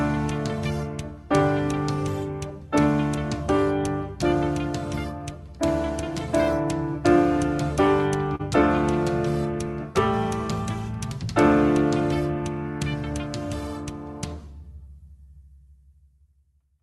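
At 8.35 s, a short stall from a late packet holds the sound for about 40 ms. Nothing is lost, but it briefly drags, with a faint buzz or dip.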